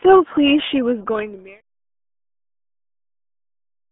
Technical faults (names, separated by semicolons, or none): RealAudio 14.4 codec